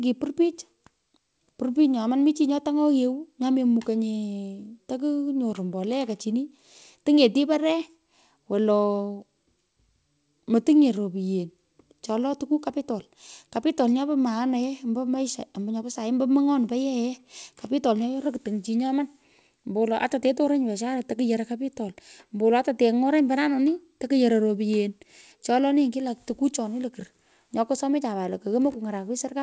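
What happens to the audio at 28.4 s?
Nothing goes wrong at 28.4 s: the speech carries on intact through the call path, with only the steady 8 kHz ceiling of the G.722 codec that runs under the whole recording.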